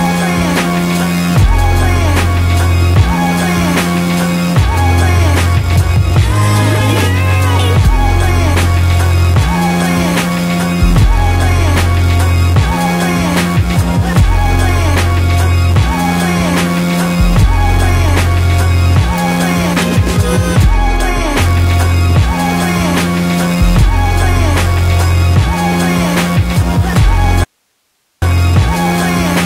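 At 27.44 s the sound cuts abruptly to faint hiss, far below the signal, for 0.78 s until 28.22 s: an audio dropout to a faint residue, likely a brief signal loss with the path left live.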